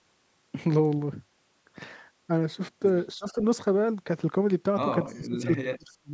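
Speech recorded through call microphone processing, with nothing above 8 kHz. From 3.15 to 3.38 s the voice dips by roughly 20 dB. It fades again from 5.15 s to the end, falling by around 35 dB over about 0.7 s. These dips sound like speech suppressed in double talk. The echo canceller likely heard both sides at once and turned the talker down. At 5.13 to 5.19 s there is an echo leak. A very faint copy of the voice, about 35 dB below it, returns roughly 0.3 s late, likely through a loudspeaker path that was not fully cancelled.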